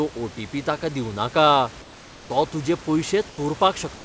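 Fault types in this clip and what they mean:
Comfort noise in place of the background: in pauses at 1.82 s (480 ms), 3.30 s and 3.96 s (80 ms each), the textured room noise becomes a smooth, featureless hiss about 2 to 5 dB quieter, likely from discontinuous transmission. Unlike a dropout, it never falls silent.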